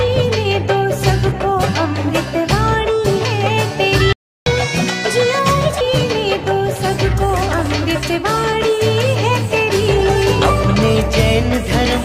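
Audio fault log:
4.13–4.46 s, playback stall: the sound cuts out mid-flow for about 336 ms and then resumes. The silent gap most likely comes from the player's buffer running dry or its output thread being blocked, so nothing reached the output until it recovered.
4.46–5.81 s, catch-up at higher speed: immediately after the gap, playback runs at 1.25 times normal speed, raising pitch by roughly four semitones. The player is resampling its backlog to recover lost time, then drops back to normal rate and pitch.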